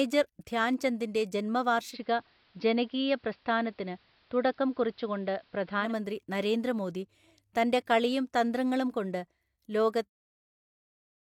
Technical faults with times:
1.85-5.94 digital radio blending to analogue

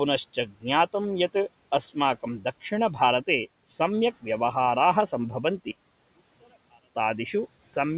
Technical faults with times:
0.34-0.65 speech cut by the noise suppressor
5.71-6.95 one channel inverted

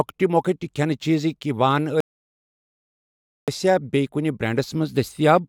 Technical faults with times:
2.00-3.48 rebuffering stall

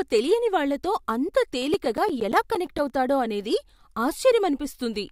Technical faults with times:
1.62-2.90 CD scratch ticks

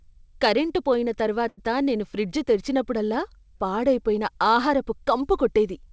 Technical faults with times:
1.48-1.59 short stall from a late packet

